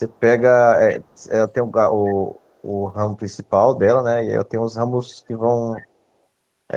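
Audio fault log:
0.12 to 0.2 s and 0.91 to 1.25 s, echo leak: a delayed copy of the speech trails the original by 281 ms, barely audible in the first brief scrap, then clearer, though still some 25 dB under the direct speech, over the longer second stretch. This is likely a loudspeaker at the far end whose echo canceller let part of the microphone pickup through and sent it back down the call.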